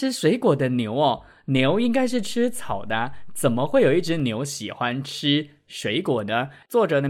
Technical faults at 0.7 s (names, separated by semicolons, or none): none